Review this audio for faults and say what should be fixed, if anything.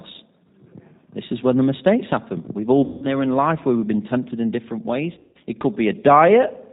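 G.729 codec damage runs through the whole clip. The speech has the rough, slightly synthetic texture of a model-based coder that rebuilds each 10 ms frame from a vocal tract filter, a pitch predictor and a few pulses. Everything above 4 kHz is missing, which fits an 8 kbit/s G.729A link. To prevent it, carry the call on a wideband codec such as G.722 or Opus instead.

VoIP packet loss concealed by the speech codec occurs at 2.84 to 3.09 s, just before "in life where we've", and at 5.15 to 5.37 s, just after "been tempted in different". Each gap loses about 180 ms. In the second, the losses are scattered over 200 ms, with the longest run lasting 160 ms. The decoder stretches its last pitch and filter into a buzzy tone or coloured noise that fades, and the voice stays weak briefly after packets resume. To prevent it, reduce network loss and add jitter buffering or forward error correction.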